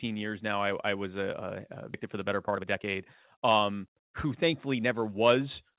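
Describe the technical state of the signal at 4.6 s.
A jitter buffer speed-up runs from 3.38 to 5.15 s: repeated pitch-period cuts drain excess buffered audio, playing about 8% faster at unchanged pitch, sounding hurried.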